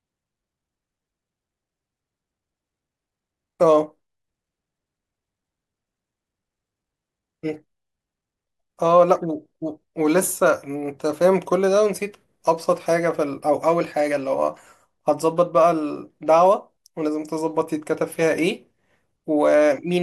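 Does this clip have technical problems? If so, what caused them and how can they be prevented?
No, the speech signal is continuous and stable, with nothing in it that points to a fault in capture, processing or transmission.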